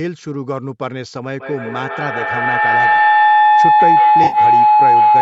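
Speech, with two faults. From 1.4 s to the end, a feedback howl builds. A nearby device on the same call is feeding its loudspeaker back into the microphone, and each pass gains level. The tone settles near 1 kHz, pulses roughly every 150 ms, and peaks about 11 dB above the speech. From 4.24 to 4.38 s, AAC frame loss with concealment smears the sound. About 70 ms is missing across a 100 ms stretch, with the longest gap around 50 ms. The decoder patches the gaps from earlier spectrum, which gives a brief noisy, phasey blur. The light coding grain is likely from low-delay AAC-ELD.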